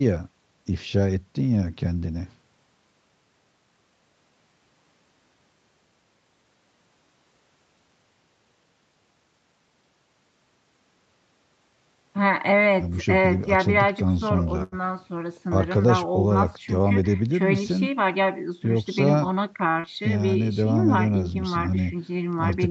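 At 14.63 s a packet arrived late and the jitter buffer ran dry, causing a short stall from a late packet. The receiver held the last sound for about 86 ms until the packet turned up, then resumed from the same point, so nothing of the speech is lost. What you hear is a syllable dragged out slightly too long, with a faint buzzy, flattened quality, ending at 14.75 s.

From 16.73 to 17.22 s there is a jitter buffer speed-up. Extra audio had piled up in the buffer, so the receiver trimmed out many tiny pitch-period slices in quick succession, about 70 ms in all, to bring the delay back down. The speech plays at roughly 115% speed while the pitch stays where it was, giving that half-second a hurried, clipped rhythm.

A second, shorter stall begins at 19.72 s. Again a late packet emptied the buffer, and the last sound was extended by 37 ms before playback picked up without any gap in content, leaving a brief held smear that ends at 19.79 s.

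Immediately after, at 19.80 s, comes a short concealed packet loss: 40 ms never reached the decoder, and the receiver covered the hole with 36 ms of synthesized continuation before blending back into real audio at 19.86 s. This sounds like a quick smear or wobble, and any short consonant there may be gone. The whole clip is band-limited at 8 kHz by the Opus call path.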